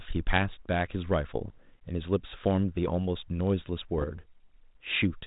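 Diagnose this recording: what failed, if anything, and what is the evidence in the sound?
What failed is the ADPCM link itself: bit errors on an ADPCM link, over a G.726 path that sounds like the 32 kbit/s cordless-phone rate. Rough pops and brief level jumps hit the speech at 1.48–1.58 s and 3.98–4.05 s. The second burst is denser. Each flipped bit knocks the decoder's step size and predictor off, so the damage rings briefly.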